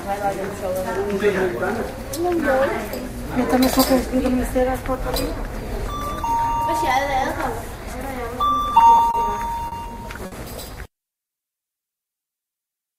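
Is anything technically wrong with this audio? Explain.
Yes, the last third of the clip has network delivery faults.

Repeated stalls (stutter) run from 8.71 to 9.17 s. Packets arrived late, emptying the jitter buffer four times, with the longest gap about 30 ms. The receiver held the last sound each time, about 60 ms in all, so nothing drops out, but the sound catches and drags.

A short stall from a late packet happens twice: at 9.68 to 9.75 s, about 40 ms, and at 10.26 to 10.35 s, about 60 ms. Each time one packet was missing when due, so the sound is held over the gap and then resumes where it left off. Each shows as a brief freeze with a faint buzz or dip.

A jitter buffer slow-down lasts from 11.11 to 12.96 s. To rebuild its reserve, the receiver repeated tiny slices of the signal, adding 134 ms. Playback drops to 93% speed at unchanged pitch, so the sound seems drawn out.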